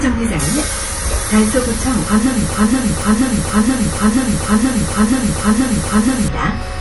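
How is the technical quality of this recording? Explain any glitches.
Quality is poor: there is audible compression damage throughout, and the audio sticks in a loop for most of its second half.

MP3 compression affects the whole clip. Nothing is present above about 11.5 kHz, and the remaining detail sounds watery and swirly, with smeared attacks. This is likely a starved MP3 encoder, consistent with a low bitrate around 48 kbps, cutting the treble and zeroing weak frequency lines frame to frame.

A broken-record loop runs from 2.54 s to 6.28 s. A fragment of about 0.48 s repeats exactly, back to back, eight times, and the audio that should have played there is missing. The likely cause is a stalled player or stream resending its last buffered piece.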